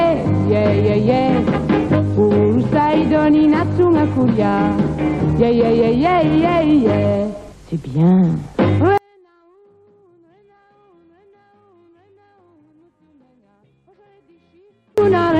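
From 8.98 to 14.98 s the sound nearly vanishes, dropping about 39 dB. One channel inverted likely cancels everything common when summed to mono.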